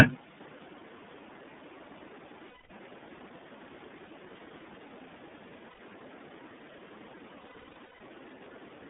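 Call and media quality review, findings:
iLBC codec, whole call. Speech band-limited to roughly 200 Hz to 3.6 kHz, nothing on top. Plainly audible coding damage: rough, slightly synthetic texture on every word. Probable component: narrowband VoIP codec. Each frame's excitation coded independently. Cost fits iLBC's 13.33 kbps mode with 30 ms frames.

Lost iLBC frames, four places. 2.49–2.70 s: 210 ms held, buzzy vowel, fits seven lost 30 ms frames. 4.05–4.08 s: brief 30 ms held vowel. 5.70–5.79 s: 90 ms breathy hold. 7.41–8.01 s: repeated dropouts scattered over 600 ms, longest around 150 ms. Decoder concealment repeats the last pitch cycle plus noise. Recovery is immediate after each gap because frames stand alone.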